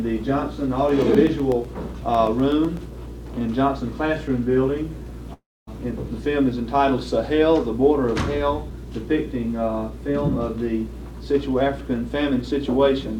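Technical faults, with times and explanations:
0.89 to 2.90 s, periodic USB or driver dropouts: regular ticks every 0.125 s, about fifteen, each a roughly 1 ms gap of silence as something stalls the bus or driver.
5.33 to 5.69 s, long network dropout: the sound smears into a fading buzz, goes silent for about 250 ms, then resumes with about 340 ms gone, likely lost packets.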